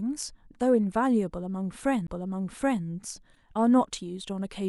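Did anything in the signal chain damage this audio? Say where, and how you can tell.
Yes. At 2.07 s there is a CD skip at the disc playback stage. A tick sits over a very brief mute, and the speech then resumes from a different point on the disc. The surrounding sound does not join up across it. That break is the sign. A knock or a surface flaw threw the laser onto a neighbouring turn of the spiral. The player muted for a moment, then carried on reading from the new track position.

The second fault is damaged data in a compressed stream, from 3.33 to 3.37 s. It sits at the codec stage, where stored or transmitted data is decoded. For about 40 ms the speech gives way to a short, synthetic blip or chirp. The sound does not resemble speech or acoustic noise. Some bytes in the compressed frames were corrupted. The decoder misread those frames and lost sync. It then searched for the next valid frame header before producing clean output again.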